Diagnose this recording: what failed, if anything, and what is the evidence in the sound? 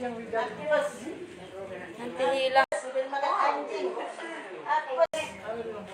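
At 2.64 s the input drops to silence for about 80 ms. Until 5.14 s the sound is duller, with nothing above 10.5 kHz, a level shift of around 5 dB, and a new background noise roughly 40 dB below the signal. The full band then returns. At the driver or device stage, this is likely an input switched to a poorer device, whose narrower band, different gain and own noise floor replaced the original microphone during that span.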